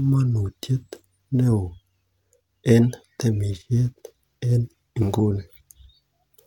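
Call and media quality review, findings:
No audible faults found in the speech recording. Nothing to flag for follow-up on this clip.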